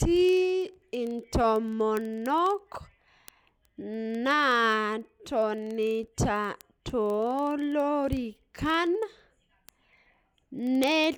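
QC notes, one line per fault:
0.12–11.16 s, word clock ticks: there's a steady stream of ticks running under the speech about every 40 ms, a few hundred in all. That's a digital link being read by a device on its own clock, not locked to the sender. Each time the two clocks slip past each other a sample gets dropped or repeated, and the rate points to the clocks being roughly 500 ppm apart.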